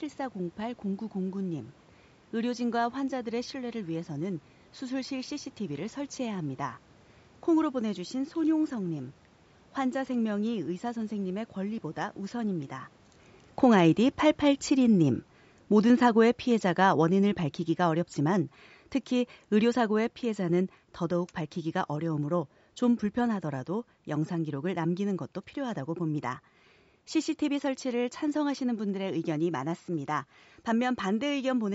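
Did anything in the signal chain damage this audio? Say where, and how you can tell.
Yes. Automatic gain falling, in the call processing. From 13.48 s to 25.04 s the level drops by about 11 dB. Room noise drops too, and a talker moving near 13 s would not do that. The control judged the input too loud, or its background noise too strong, and eased gain down.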